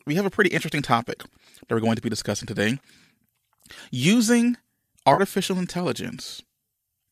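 A brief smeared, phasey patch at 0.35 to 0.37 s, then a longer noisy blur from 5.14 to 5.21 s, are AAC frame loss with concealment. The decoder patched missing frames from the last good spectrum, and the gap lengths fit frames of the likely low-delay AAC compression.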